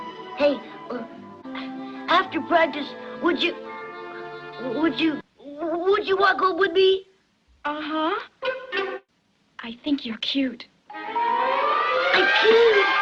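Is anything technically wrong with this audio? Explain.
No, nothing technically wrong stands out here; it all sounds just as it should.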